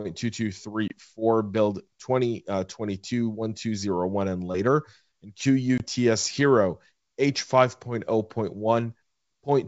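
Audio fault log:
0.88–0.92 s and 5.78–5.82 s, packet loss on an ADPCM call: each 20 ms silent hole, about one packet, leaves a flat waveform and blank spectrogram column, then speech returns slightly distorted as the predictor resyncs.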